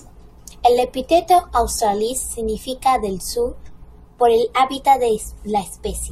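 At 1.76 s there is a single sharp click, the signature of dropped samples. The stream most likely lost around one sample at that point, a gap of only a few hundredths of a millisecond, so the waveform steps straight from one value to a later one instead of moving smoothly between them. Nothing audible is removed. The abrupt step itself produces the brief click, which shows on a spectrogram as a thin vertical line spanning the frequency range.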